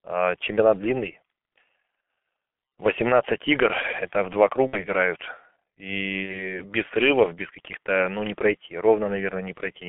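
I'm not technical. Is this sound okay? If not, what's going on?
No. Two problems can be heard.

The whole clip has passed through the G.723.1 codec, an old internet-phone codec that squeezes speech very hard. It keeps only a narrow band of sound, roughly from 200 Hz up to 3.5 kHz. The highs are gone. So the speech sounds muffled and a bit hoarse, like a poor phone line. Consonants such as s and t come out blurred. The damage here is heavy.

There are also two moments of VoIP packet loss concealed by the speech codec. Small chunks of the call, about 60 ms each time, never arrived. The decoder filled the gap by guessing from the last sound it had. The first is at 4.67 to 4.84 s, right after "игр это в два". The second is at 6.23 to 6.59 s, just before "без срывов без". At each spot the speech turns buzzy or smeared and fades. It stays weak briefly after the sound returns.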